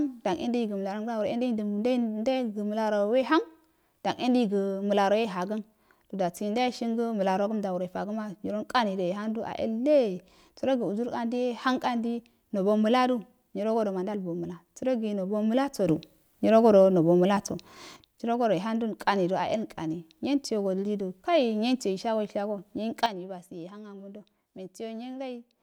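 A gain change, likely applied without a ramp, causes a sudden gain jump. After "nyirogodo nobo", speech and background noise rise together by about 8 dB from 15.88 to 17.97 s. After "nyuyensiyio shasoishgo nyiyen", they drop by about 10 dB from 23.06 s to the end.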